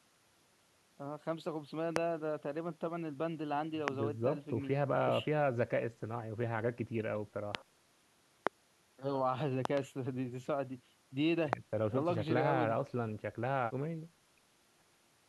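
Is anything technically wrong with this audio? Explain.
Yes. Loud pops break through the speech at 1.96, 3.88, 7.55, 8.47 and 11.53 s, each a single hit about 20 ms long, plus a double pop from 9.65 to 9.79 s. They are likely voltage spikes from a plug, switch, static or driver glitch, riding some 20 to 25 dB above the speech, which continues underneath. On a waveform each is a tall, narrow spike; on a spectrogram, a thin vertical stripe spanning all frequencies.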